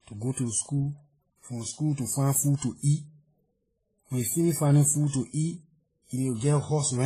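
From start to finish the speech carries two layers of codec damage heard together, the mark of transcoding between lossy codecs. The sound most likely passed through a low-rate encoder, in the region of 24 kbit/s, and was then re-encoded as MP3 at around 46 kbit/s. The MP3 stage spends its bits reproducing the earlier artefacts while adding its own. Nothing is present above 14.6 kHz.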